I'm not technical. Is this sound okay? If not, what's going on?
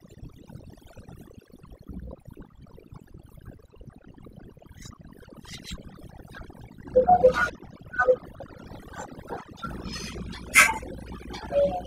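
No, it isn't quite right. Throughout, this speech has overdone noise removal: a cleanup tool set too strong silences any sound it mistakes for hiss, taking soft parts of the voice too. Unlike simple muffling, the gaps fall near-silent with faint twinkling specks.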